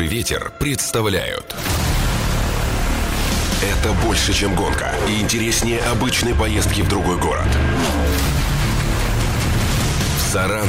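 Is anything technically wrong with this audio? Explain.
No, nothing is technically wrong with this audio.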